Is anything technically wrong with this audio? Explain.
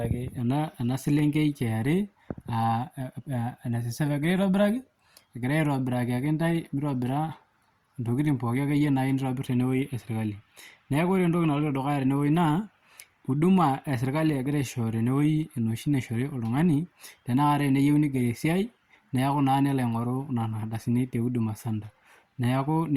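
Yes. Two sharp clicks at 1.19 s and 15.43 s are likely dropped samples. Each is a fraction of a millisecond lost, so the waveform jumps abruptly and a thin vertical line crosses the spectrogram.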